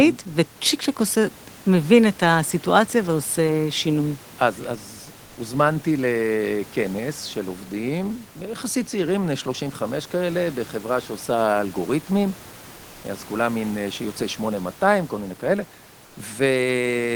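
A speech recording with room noise sitting about 25 dB below the voice, and at 16.05 to 16.15 s the real background drops out for 100 ms, replaced by a flat, featureless hiss about 3 dB quieter. That is comfort noise in place of the background, likely from Opus discontinuous transmission (DTX) halting the stream during a pause while the receiver synthesises filler noise.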